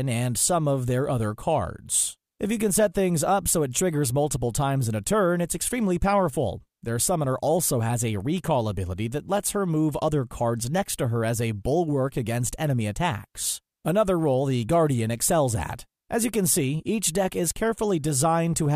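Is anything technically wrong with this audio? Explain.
No, the signal shows no technical faults at any point.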